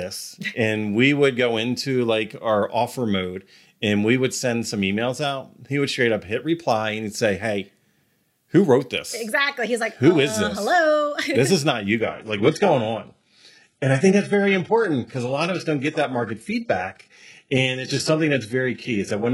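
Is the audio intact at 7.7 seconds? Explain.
Yes, the speech at 7.7 seconds plays through intact, with no dropout, click, distortion or other audible fault at that point.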